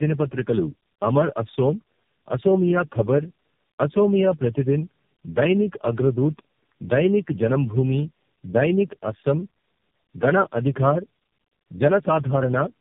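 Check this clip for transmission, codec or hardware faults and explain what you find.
One fault runs through the whole recording. Tandem speech coding throughout: the speech was decoded and re-encoded at each network border, apparently by about four low-rate speech coders in a row, each degrading the previous output. The result is rough, warbly, muffled speech with nothing above 3.6 kHz.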